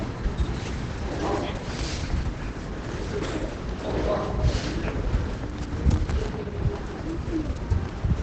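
Opus compression runs throughout the clip, with heavy damage. The sound is muffled and hoarse, with its top end cut off near 8 kHz. This points to the encoder's SILK speech mode at a very low rate, likely around 12 kbps, thinning detail everywhere.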